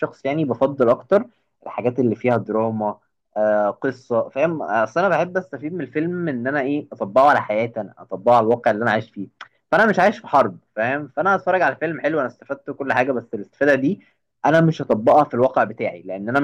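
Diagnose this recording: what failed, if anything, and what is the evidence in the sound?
A gain stage drove the speech about 3 dB past full scale at the converter or sample-format conversion, so hard clipping flattens peaks throughout. Only a small fraction of samples, well under one percent, are cut, heard as brief crackle with added high harmonics on the loudest syllables.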